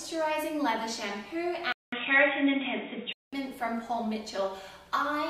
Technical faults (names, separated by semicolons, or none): input switched to a poorer device